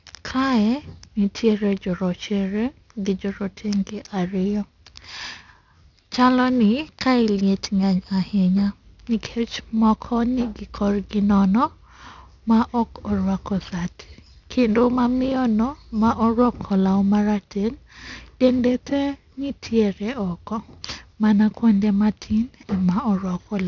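Aliasing runs through the whole speech clip. The audio was resampled down without an adequate anti-alias filter; the content stops sharply at 6 kHz, which fits a drop from 44.1 kHz to 12 kHz, and energy above that folds back below it at roughly 25 dB under the speech. Sibilants sound gritty and metallic, with spurious tones that don't follow the voice's pitch. A simple low-pass would sound dull but clean instead.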